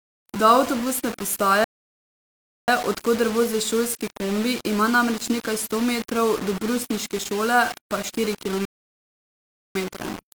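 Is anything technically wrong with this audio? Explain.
Yes. Throughout the speech, the audio was likely reduced to very few amplitude steps by plain rounding with no dither, the pattern of low bit depth without dither, and the graininess fits roughly 5-bit resolution. Because the rounding error tracks the waveform rather than sitting as a steady hiss, the quantisation noise rises and falls with the voice, only about 15 dB below it. Syllables sound gritty and buzzy, and the quietest tails break up or sputter.

There are two rebuffering stalls, where playback ran dry and waited for more data before carrying on. The first runs from 1.64 to 2.68 s, adding about 1.04 s of silence before the speech picks up with "od koder vozi šolski". The second runs from 8.65 to 9.75 s and adds about 1.10 s. In each, the sound halts abruptly and then continues from exactly where it stopped, with nothing missing, only time inserted.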